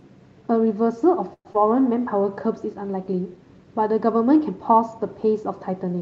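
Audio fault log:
1.33 to 1.47 s, call audio freeze: the sound stalls for 116 ms, trailing into 60 ms of silence. Delayed packets likely emptied the buffer, then playback resumes intact.
1.53 to 1.56 s, skip ahead: playback jumps forward, losing about 70 ms. The dropped stretch leaves the two sides joined almost directly, with barely any gap.
1.69 to 2.01 s, jitter buffer slow-down: the audio plays at 88% speed, stretched by 45 ms. Repeated pitch periods rebuild the buffer reserve, so sounds drag at unchanged pitch.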